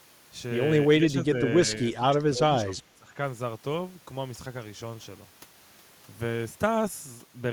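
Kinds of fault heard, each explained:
Speech suppressed in double talk: the speech dips about 10 dB near 1 s, then roughly 20 dB from 1.9 to 3.2 s, likely an echo canceller clamping down while both sides talked.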